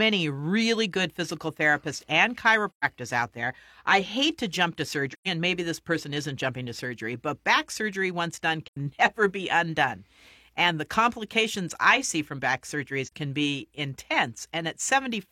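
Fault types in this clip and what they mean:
AAC frame loss with muting: lost codec frames are zeroed, so the overlapping windows fade speech out and back in, leaving soft-edged gaps of about 43 to 128 ms. A spectrogram shows brief full-band blank columns; the waveform tapers smoothly to flat silence.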